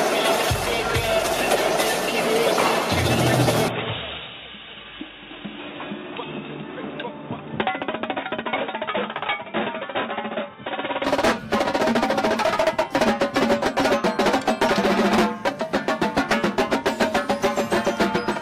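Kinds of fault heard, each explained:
Input switched to a poorer device: from 3.68 s to 11.05 s the sound turns dull and boxy, with nothing above 3.8 kHz, drops in level by about 5 dB and carries a faint new background noise well below the signal, then clears again at 11.05 s. Both changes happen instantly with no gap. This is likely a change of capture device mid-recording, such as a narrower-band microphone or headset path taking over and later handing back.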